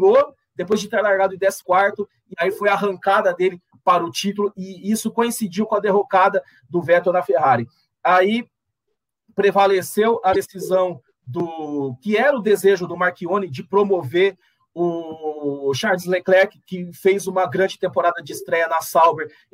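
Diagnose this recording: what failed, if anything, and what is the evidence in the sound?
Two brief disturbances break the audio at 1.58–1.63 s and 10.31–10.36 s, each about 50 ms long. This is damaged data in a compressed stream at the codec stage: corrupted bytes make the decoder misread frames and lose sync until it finds the next valid frame header.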